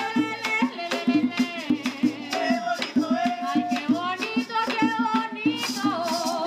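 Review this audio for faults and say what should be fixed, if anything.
Two isolated clicks sit at 4.67 s and 5.83 s, each a single sharp tick that would show as a thin vertical line across the spectrum. They are likely dropped samples: a fraction of a millisecond of the stream goes missing, so the waveform jumps straight from one value to a later one. The gap is far too short to remove any audible sound, but the abrupt step itself produces the click. To prevent it, give the capture or playback path enough buffer headroom and priority that it never skips samples under load.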